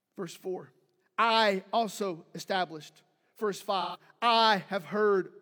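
At 3.81 s the speech breaks into a brief AAC frame loss with concealment lasting until about 4.00 s. Roughly 128 ms of coded audio went missing, which fits about three lost frames, and the decoder filled the gap by reusing the last good spectrum with randomised phase, so the sound turns smeared and noisy rather than dropping out. On a spectrogram the harmonic striations blur into a flat, frozen smear; the waveform envelope there looks unnaturally steady.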